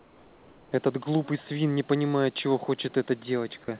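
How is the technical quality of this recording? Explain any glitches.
The one glitch sits at the very start of the clip, in the pause before the talking begins; the audio is band-limited, with nothing above 4 kHz, and a low room noise about 40 dB below the speech runs underneath.

From 0.00 to 0.72 s, the background is replaced by comfort noise. Instead of the room's natural hiss, that opening 720 ms carries a smooth, featureless noise about 4 dB quieter than the real background that follows, which itself sits about 29 dB below the loud passages. This is likely discontinuous transmission: with no speech detected, the sender paused and the receiver filled the gap with synthetic noise roughly matched to the background's spectrum. The switch to the genuine background is audible as a small step in level and texture when the sound starts.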